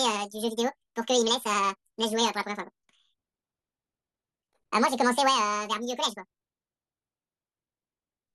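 Throughout, audio read two samples at a time (double speed): sample pairs taken as single frames make speech twice as fast and an octave higher.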